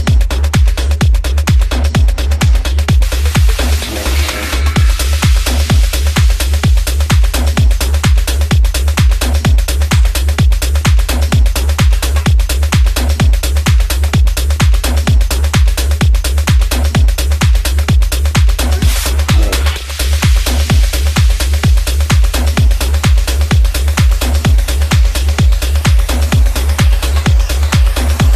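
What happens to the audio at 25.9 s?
Nothing goes wrong at 25.9 s; the sound there plays through cleanly, with no dropout, click, distortion or other fault.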